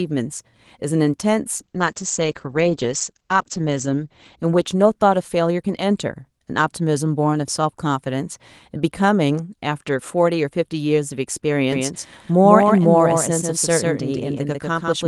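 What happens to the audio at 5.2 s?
At 5.2 s the clip is still inside a call bitrate drop running from 1.59 to 5.59 s: the encoder's rate fell from 32 to 11 kbps, bottoming out for about 2.2 s, and the audio bandwidth narrowed from 20 kHz to 8 kHz, so the speech sounds coarse, watery and muffled until it recovers.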